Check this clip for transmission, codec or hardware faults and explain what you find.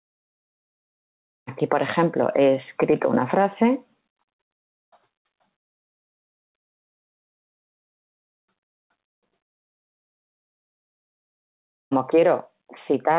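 Two faults stand out: gain pumping across the whole clip and one long gap near the end. The band stops at 4 kHz, which fits a G.711 call codec at 64 kbps.

Gain pumping runs from start to finish. The gain is pushed down each time a loud sound arrives, a swing of roughly 10 dB. Loud and quiet passages sit unnaturally close together, giving a squashed, breathing quality. The likely cause is input gain set far too high, with a fast limiter or compressor clamping down on every peak and releasing in the gaps.

A long network dropout occupies 9.42 to 11.93 s, about 2.5 s. The sound stops mid-flow, the receiver briefly extends the last fragment as a fading buzz or hiss, and then there is near silence or a faint steady floor for the rest of the gap. Audio resumes at 11.93 s with that stretch simply gone. The likely cause is packets failing to arrive for that period, leaving the receiver nothing to play.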